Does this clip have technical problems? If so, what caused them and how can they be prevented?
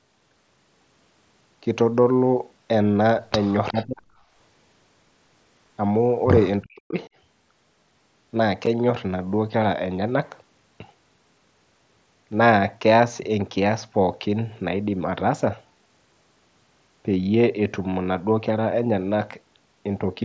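Yes. Three kinds of fault are audible in this speech clip.

Echo leak: from 3.69 to 3.84 s a faint delayed copy of the far talker's voice comes back, about 358 ms late and roughly 20 dB below the main speech. This is likely a loudspeaker-side echo canceller that did not fully cancel what its microphone picked up, so a short residue was sent back into the call. Using a headset on that side, or a better-tuned echo canceller with adequate tail length, prevents it.

Speech suppressed in double talk: from 3.71 to 4.10 s and again from 6.61 to 6.99 s the talker's voice drops sharply, by as much as around 40 dB, for roughly 0.4 s each time while the other side is also speaking. The likely cause is an echo canceller that could not separate the local talker from the loudspeaker echo and attenuated both together. A canceller with proper double-talk detection, or headsets that remove the echo path, prevents this.

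Unconcealed Bluetooth headset packet loss: at 8.66 s there is a 7.5 ms hole with abrupt edges, which fits a single lost frame on the headset link. The gap was filled with silence or an idle pattern rather than concealed, so it is heard as a brief abrupt break in the voice. Keeping the headset close to the phone and away from 2.4 GHz interference, or using a stack with packet-loss concealment, prevents it.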